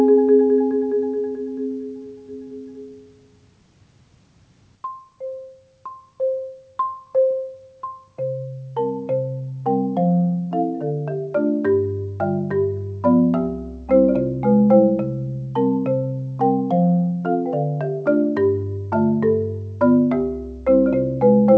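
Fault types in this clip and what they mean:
Nothing stood out on listening; the sound keeps to the limited bandwidth of a call, with nothing above about 8 kHz.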